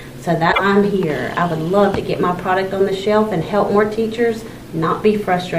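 Damaged data in a compressed stream from 0.49 to 0.61 s makes the decoder misread corrupted frames and lose sync, leaving a brief glitch in the audio.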